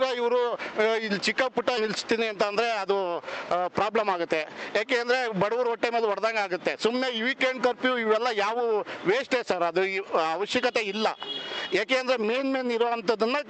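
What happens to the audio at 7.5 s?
Nothing goes wrong at 7.5 s: the audio passes through intact, with only the steady band-limited character of the call path carried over from either side.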